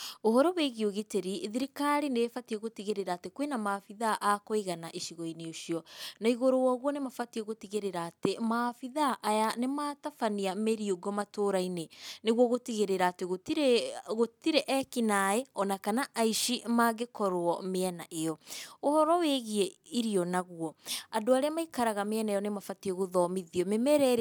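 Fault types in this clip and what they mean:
No technical faults are audible anywhere in this speech recording.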